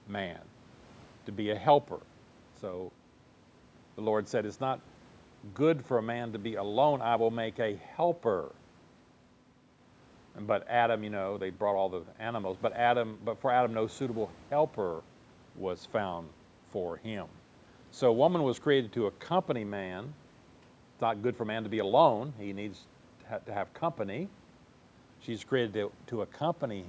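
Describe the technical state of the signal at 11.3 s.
At 11.3 s the audio is intact, with only the normal call microphone processing and faint room noise, about 30 dB below the speech.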